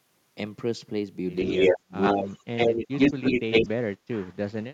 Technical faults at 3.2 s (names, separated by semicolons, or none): clock drift buffer slips; echo leak; speech suppressed in double talk